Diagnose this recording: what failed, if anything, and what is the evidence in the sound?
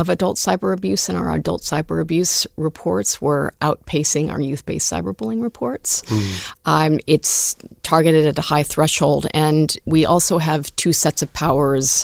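Nothing in this speech recording points to a failure at any stage. The Opus voice compression keeps the full audio band, which fits its hybrid mode, and leaves only a light coding colour on the sound.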